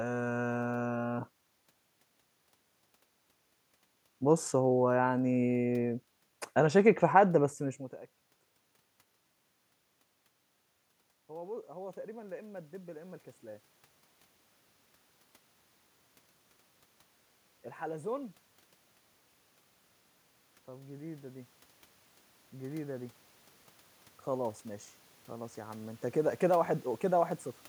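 At 11.14 s the input level fell by about 24 dB, and the automatic gain control responded by raising its gain about 6 dB over the next two seconds, to 13.29 s. From 20.51 s to 26.3 s the automatic gain rose again, this time about 9 dB, more slowly. Each time the speech and the room noise swell together, so the background climbs audibly along with the voice. The level change around 7.5 s is the talker moving, not the gain control.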